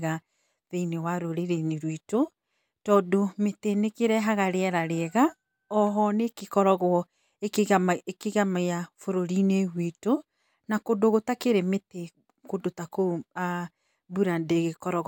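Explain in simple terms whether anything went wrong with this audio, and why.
Nothing went wrong; no faults can be heard here.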